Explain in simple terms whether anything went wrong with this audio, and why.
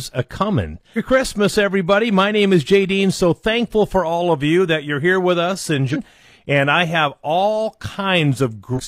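Three short chirps or blips break into the speech, at 0.93 to 0.99 s, at 5.90 to 5.97 s right after "you're here with us", and at 8.73 to 8.81 s. This is damaged data in a compressed stream. The player briefly lost its place in the corrupted file and searched for the next good frame to recover.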